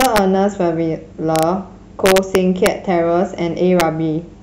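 Integer overflow: loud peaks exceed the largest integer and wrap to the opposite sign instead of being limited, so each one flips across the full range. The speech cracks violently at 0.01 to 0.18 s, 1.36 to 1.43 s, 2.06 to 2.67 s and 3.80 s, harsher than clipping despite only about 0 to 2 dB overdrive.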